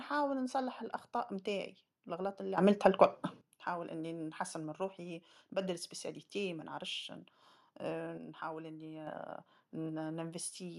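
From the start, the speech sounds dull and gurgling, with a granular edge. Nothing is heard above about 12.2 kHz. This is most likely MP2 compression at a rate near 80 kbps, where too few bits forced the upper sub-bands off and left the rest coarsely quantised.

At 2.58 s the level leaps up by about 13 dB, background noise included, and drops back at 3.41 s. At 8.18 s it falls by about 6 dB until 9.07 s. Each is a sudden gain jump. Both are likely digital gain changes applied without a ramp.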